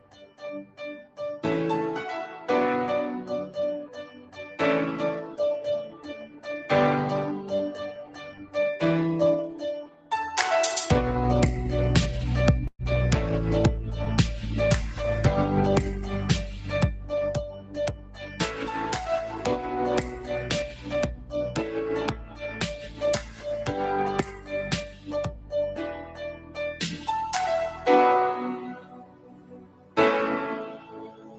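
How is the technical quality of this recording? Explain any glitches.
The recording is compromised: the sound pumps and thins throughout, it sinks in level in repeated stretches, and there is one brief stall. The band stops near 8 kHz, consistent with an Opus call path running at about 20 kbps.

Throughout, the level swings by about 15 dB, with held sound and tails sinking while attacks push through. This is a speech noise suppressor applied to music or sounds. It mistakes steady, non-speech content for noise and keeps clamping down on it.

Sound cut by the noise suppressor is heard at 0.0–1.19 s, 3.88–4.58 s, 5.89–6.46 s, 8.0–8.55 s and 9.83–10.11 s, and again from 17.46 s to the end. In each stretch, sustained parts drop by about 10 to 12 dB and decays are cut short.

At 12.67–12.82 s the audio stalls. It is briefly continued, then falls to about 40 ms of silence, and resumes where it left off, so nothing is lost but the timing shifts by 115 ms. 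This is likely a call audio freeze, where delayed packets left the jitter buffer empty.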